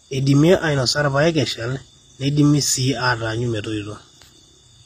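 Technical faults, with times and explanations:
Throughout, likely HE-AAC compression: the speech carries plainly audible coding damage and nothing above 15.5 kHz. The treble is rebuilt by copying lower bands upward, so its harmonics fail to line up and s sounds turn gritty and metallic, which fits a low bitrate near 24 kbps.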